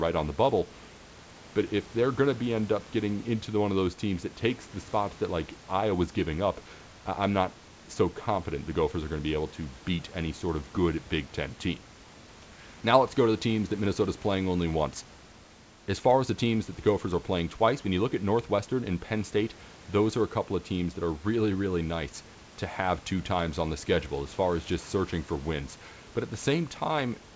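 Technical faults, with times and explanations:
No technical faults are present: the speech arrives over a G.722 call path with nothing above 8 kHz, and the room's background noise sits about 26 dB below it.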